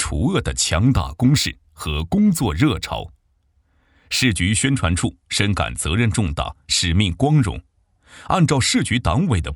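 From 0.73 to 4.31 s there's imaging from linear upsampling, which fits a 24 kHz source stretched to 44.1 kHz by joining samples with straight lines. The top end sounds dulled, and a faint mirrored copy sits around 30 dB down between 12 and 24 kHz, adding a light metallic shimmer.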